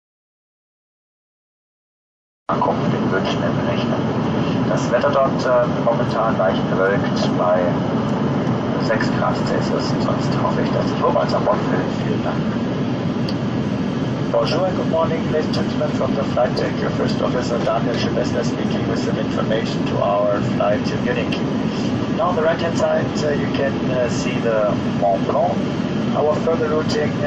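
At 2.46 to 2.49 s, pre-echo: codec noise about 32 dB up smears 27 ms ahead of a sharp attack, suggesting a long transform block without short-block switching.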